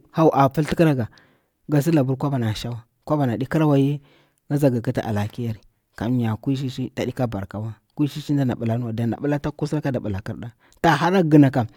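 Listening to the speech in this clip, nothing stood out as a technical problem at any point.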